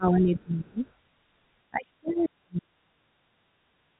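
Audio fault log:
0.0–0.84 s and 1.7–3.11 s, speech suppressed in double talk: the talker's level sinks by about 25 dB in the first stretch and about 40 dB in the second, likely an echo canceller turning everything down while both ends spoke. The waveform envelope caves in, and the spectrogram shows energy fading in patches.
0.87–0.91 s and 2.09–2.25 s, other side's voice leaking through: a faint second voice emerges, about 40 dB under the speech in the brief first scrap and about 20 dB under it in the second. It is likely loudspeaker pickup the canceller left behind, visible as separate weak traces beneath the telephone band edge near 3.8 kHz.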